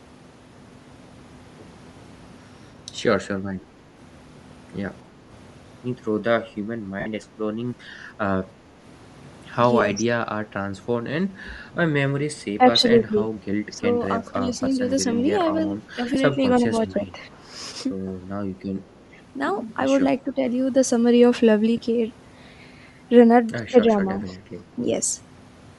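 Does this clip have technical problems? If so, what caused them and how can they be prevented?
Yes. The speech carries a breathy, grainy edge throughout, with the upper frequencies sounding thin and noise-like rather than detailed. This is likely Bluetooth LC3 compression, the LE Audio transform codec working in 10 ms frames. At this rate it zeroes much of the upper spectrum and fills the gaps with noise, and the result fits a setting of about 48 kbps. Choosing a higher LC3 bitrate, or a wired or less constrained link, would keep that high end intact.

Brief noisy smears replace the speech at 7.00–7.06 s (60 ms), 9.80 s, 16.14–16.16 s and 21.77 s. These are lost LE Audio frames. The LC3 decoder filled each gap by repeating the last spectrum with random signs, so the signal turns to a short hiss-like blur. The longest gap points to roughly six missing 10 ms frames. Better radio conditions, such as a shorter distance to the device, fewer obstacles and less 2.4 GHz congestion, would reduce the losses.

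The voice dips, loses its top end or breaks into fragments at 9.94–10.07 s, 12.57–13.26 s, 13.72–13.86 s, 14.19–15.08 s, 15.66–17.18 s, 20.24–20.39 s and 23.89–24.33 s. The drops reach about 10 dB in several places and around 5 dB elsewhere. This is speech suppressed in double talk, likely from an echo canceller that could not tell this talker apart from loudspeaker echo while both sides spoke, so it turned everything down. A headset on the far end, or a canceller with better double-talk detection, would prevent it.

At 19.00–19.04 s a faint, brief delayed copy of the voice appears, trailing by 314 ms and sitting far below the direct speech, around 40 dB down. This is an echo leak, likely from a loudspeaker on the other side of the call whose echo canceller let a scrap of its microphone pickup through and sent it back. Using headphones at the far end, or lowering its speaker volume, would stop the leak.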